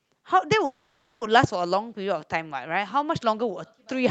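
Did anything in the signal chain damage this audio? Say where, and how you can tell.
Yes, at the network and jitter-buffer stage of the call, where a call audio freeze most likely occurred. From 0.65 to 1.23 s the sound stops and a fading fill of about 0.56 s stands in, mostly silence (about 0.48 s). Afterwards the audio resumes exactly where it halted, now about 0.56 s later. Unlike packet loss, nothing is skipped. The delayed packets arrived late, so the pause was inserted rather than cutting anything out.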